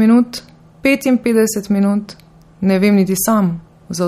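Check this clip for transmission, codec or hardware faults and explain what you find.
One codec fault runs through the whole speech clip. MP3 compression, likely at a low bitrate around 48 kbps, leaves nothing above 15.9 kHz and makes weak detail swirl and flicker between frames. Those swirly artefacts distinguish it from a simple low-pass filter.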